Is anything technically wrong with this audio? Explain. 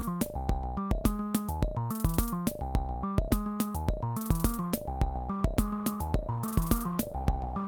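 Yes. The music carries a clock drift between sender and receiver that persists for the whole clip, and it produces a run of repeated timing corrections. The sender's sample clock runs about 1% slow relative to the receiver. The receiver consumes audio slightly faster than it arrives, so its jitter buffer keeps draining. The result is a steady, one-directional timing pressure rather than a single event, which is why small irregularities keep recurring instead of clustering at one point.

From 1.24 s to 7.08 s the receiver makes repeated timing corrections to stay in step, duplicating short pieces of audio at uneven intervals so that playback proceeds at roughly 99% of the sender's rate. Across that stretch the insertions add around 70 ms in total. Each repeat is small, so the effect shows up as faint hiccups and a slightly unsteady, dragging tempo in the music rather than as obvious stutters.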